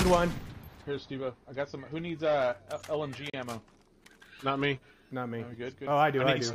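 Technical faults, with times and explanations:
3.30–3.34 s, gap between stream segments: the audio drops to hard-edged silence for about 36 ms, then resumes where it left off. The timestamps of two adjoining segments fail to meet, so the player pads the hole with silence. Nothing is lost, only delayed.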